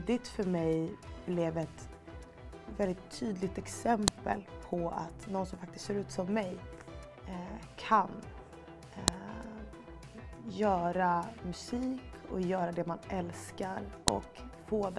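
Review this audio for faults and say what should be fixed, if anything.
File header played as audio: sharp, loud clicks at 4.08, 9.08 and 14.08 s, exactly 5 s apart. Separate WAV pieces were joined without stripping their headers, so each piece's few dozen header bytes play as samples, snapping regardless of the surrounding sound. To prevent it, strip each piece's header and concatenate only the raw sample data, or join the files with a tool that writes a single header.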